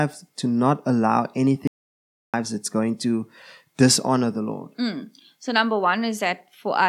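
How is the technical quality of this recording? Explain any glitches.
The recording has one clear glitch. From 1.67 to 2.34 s there is an audio dropout to silence: the speech stops abruptly and returns mid-flow after about 0.66 s, and the gap is silent with no room tone. That distinguishes it from a natural pause or noise gating. The likely cause is input loss, such as a disconnect or momentary mute, while recording continued writing silence.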